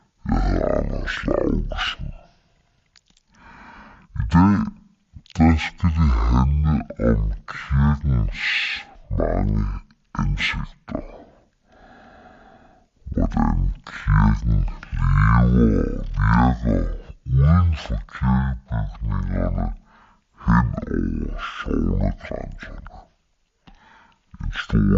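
From the first moment to the end, the speech runs at half speed and sits a full octave low, the signature of stereo read as mono. Left and right samples, stored alternately, have been taken in sequence as one channel, so each second of material is stretched over two and every pitch drops by 12 semitones. The result is slow, heavy and dragging, with a faint mirrored copy of the sound folded into the upper half of the spectrum.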